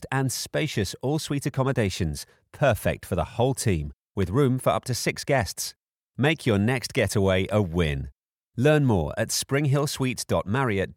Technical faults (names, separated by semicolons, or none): dropped samples